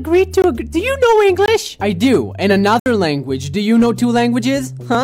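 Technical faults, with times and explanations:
Throughout: hard clipping. The signal's driven about 6 dB past what the chain can pass, so a small share of peaks get cut flat, giving crackly fuzz on loud moments.
0.42–0.44 s, 1.46–1.48 s and 2.80–2.86 s: block of digital silence. Short runs of samples drop straight to silence, 20 ms, 20 ms, then 65 ms. It likely comes from the output buffer not being filled in time.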